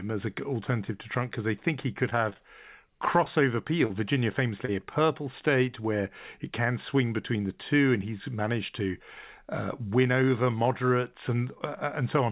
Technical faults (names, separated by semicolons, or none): repeated packet loss (robotic sound); short concealed packet loss